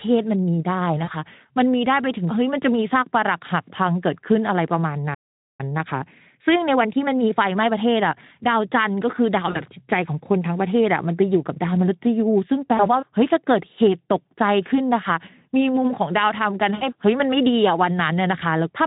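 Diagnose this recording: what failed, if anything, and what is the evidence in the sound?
Network: VoIP packet loss concealed by the speech codec at 1.03, 9.51, 12.77 and 16.75 s. Losses of 40, 40, 20 and 60 ms become buzzy or noisy, fading extrapolation, seen as smeared harmonics.

Playback: a playback stall from 5.14 to 5.61 s cuts the speech mid-flow for about 450 ms. It shows as a flat waveform gap, likely a buffer underrun.

Playback: time-compressed catch-up from 5.61 to 8.61 s runs speech at 1.1x speed with unchanged pitch. Splices leave compressed spacing on the spectrogram.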